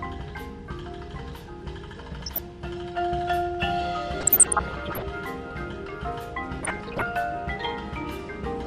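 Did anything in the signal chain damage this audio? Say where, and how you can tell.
Yes. Throughout the clip the top end is dull and the remaining sound has a granular, gurgling roughness, with upper bands seeming to drop in and out. This is likely MP2 compression at the codec stage, and the depth of damage fits a starved rate of around 80 kbps. Layer II gives each of its 32 sub-bands a share of bits. Here too few bits means upper bands are shut off and the rest are coarsely quantised. Unlike a plain low-pass filter, the loss flickers rather than sitting at a fixed cut-off.

On top of that, DAB burbling appears in three bursts at the network or transmission stage: 2.10 to 2.48 s, 4.20 to 5.02 s and 6.61 to 7.03 s. During these, short blips of noise appear in individual sub-bands over the sound. Bit errors that escaped error correction have corrupted sample values in the MP2 stream. The bursts point to error rates near half a percent in the first and about one percent in the later two. 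What distinguishes this from the steady codec roughness is that it comes and goes in bursts of noise blips.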